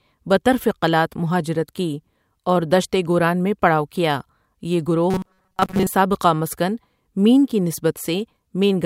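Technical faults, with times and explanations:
5.10–5.92 s: robotic sound from repeated short buffers. The speech hardens into a metallic 188 Hz buzz, likely because audio arrived too seldom and a 5.3 ms chunk was looped over most of the real signal. The spectrogram shows flat, evenly spaced harmonics, and the waveform shows identical repeating cycles.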